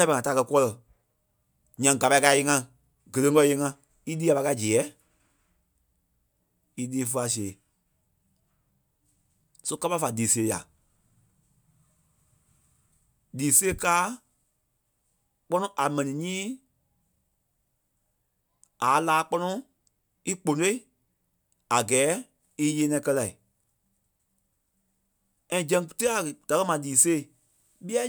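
Nothing stood out as a technical fault on listening to the speech in this recording.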